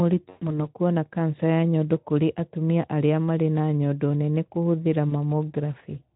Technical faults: VoIP packet loss concealed by the speech codec

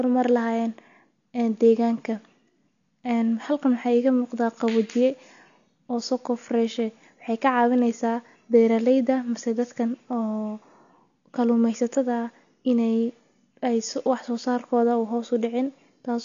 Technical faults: AAC compression

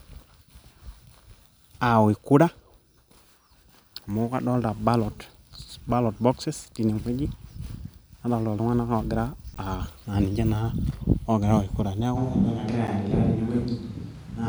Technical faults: block of digital silence; switch to a distant microphone

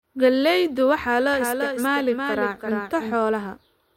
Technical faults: doubled audio track

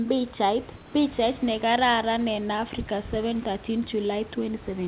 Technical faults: comfort noise in place of the background

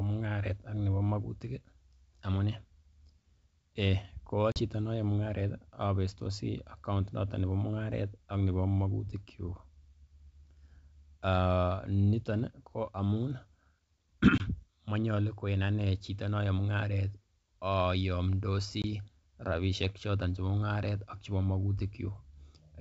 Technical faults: packet loss on an ADPCM call

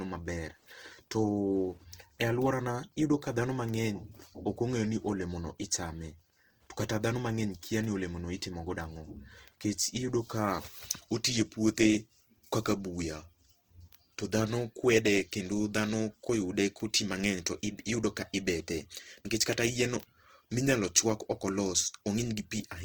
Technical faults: Opus compression; Wi-Fi interference

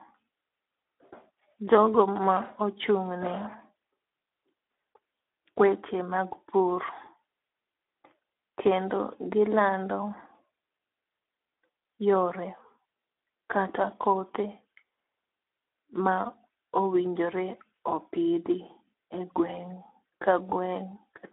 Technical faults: Speex codec

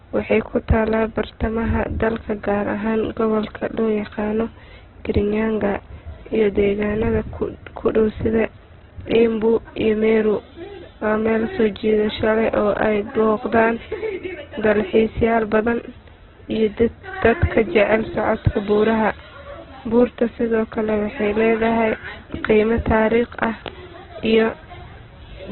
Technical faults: Opus compression

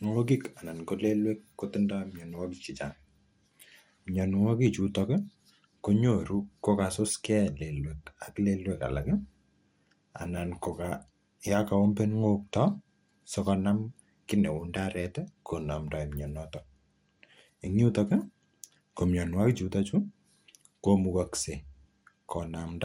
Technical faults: MP2 compression

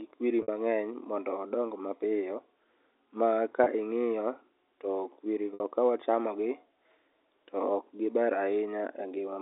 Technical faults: packet loss with pitch repetition

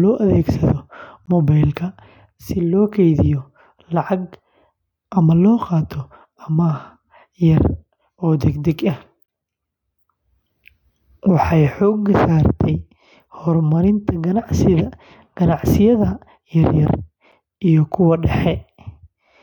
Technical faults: gap between stream segments

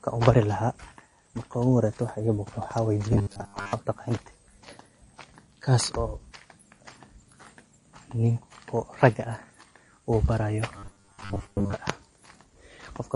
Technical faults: MP3 compression; robotic sound from repeated short buffers

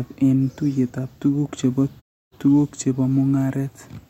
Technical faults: none

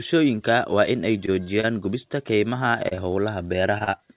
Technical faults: repeated packet loss (robotic sound)

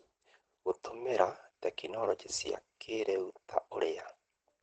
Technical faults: Opus voice compression

